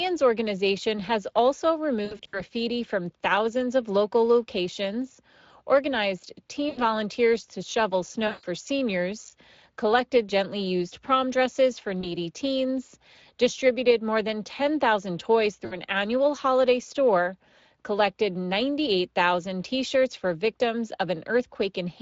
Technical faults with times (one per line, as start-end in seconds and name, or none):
0.00-22.01 Speex codec
2.05-2.42 VoIP packet loss concealed by the speech codec
6.69-6.83 VoIP packet loss concealed by the speech codec
8.27-8.44 VoIP packet loss concealed by the speech codec
12.01-12.10 VoIP packet loss concealed by the speech codec
15.65-15.78 VoIP packet loss concealed by the speech codec